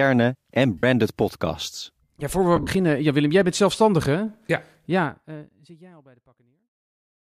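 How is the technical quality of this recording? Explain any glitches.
Two brief dropouts mar the speech. Lost LE Audio frames occur at 0.78 s and again at 2.56 to 2.67 s. When frames go missing, the LC3 decoder conceals each gap by reusing the last good spectrum with randomised signs, so the sound smears into a hazy, noisy blur instead of a clean break. The first gap lasts about 52.5 ms, which fits seven 7.5 ms frames. The second totals 67.5 ms spread over roughly 105 ms, with its longest run near 50 ms. The ending fades out smoothly from about 5 s.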